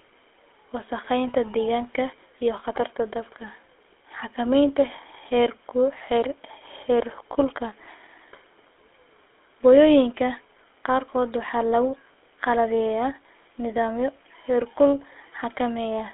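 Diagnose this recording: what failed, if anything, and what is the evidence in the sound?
The failure sits at the codec stage: the speech has passed through the GSM full-rate codec for its whole length. The band runs only from about 300 Hz to 3.5 kHz, and the voice carries a buzzy, gravelly roughness that fits a 13 kbps GSM coder rebuilding speech from a vocal-tract model and sparse pulse excitation. A plain telephone band-limit would sound muffled but smooth. Here the grainy buzz is what points to the codec.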